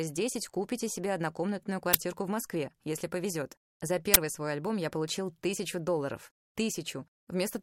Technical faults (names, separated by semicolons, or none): uninitialised buffer